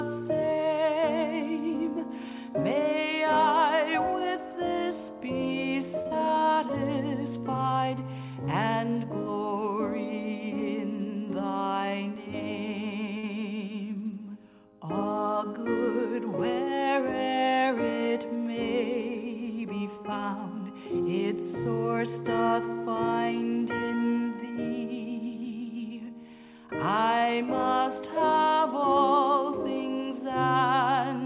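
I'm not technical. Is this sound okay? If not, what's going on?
No, there are a few small hiccups, all typical of audio sent over an internet call, which also gives it that narrow, phone-like sound with the top end cut off.

The first kind is a short stall from a late packet. A chunk of audio arrived late, so the call software held the last bit of sound until it showed up, then carried on. Nothing gets lost, but you'll hear a sound stretched a touch too long, maybe with a faint buzz. It happens at 6.02 to 6.07 s, at 13.18 to 13.25 s (the longest, about 50 ms), and at 27.18 to 27.33 s.

The second is a short concealed packet loss, right after the first stall, at 6.07 to 6.13 s. This time about 40 ms of audio never made it. The software patched the gap by continuing the previous sound and blending back in, so you may hear a quick smear or wobble there, and a tiny bit of sound is actually missing.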